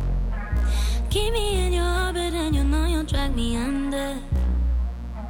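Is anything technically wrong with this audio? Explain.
Yes. Throughout, a mains buzz: switching spikes from a 60 Hz supply leak into the signal path, adding a steady, raspy buzz of harmonics sitting about 20 dB below the sound.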